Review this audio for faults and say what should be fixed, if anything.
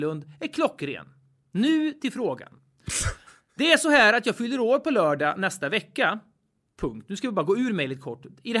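Nothing needs fixing: the speech signal holds steady throughout, with no audible technical faults.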